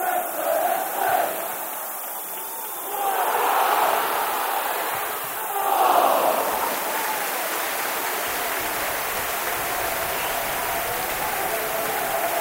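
A thin, steady hiss as loud as the sound itself runs throughout, brightening sharply toward the top: low bit depth with noise shaping, 5 bits, rounding error pushed upward.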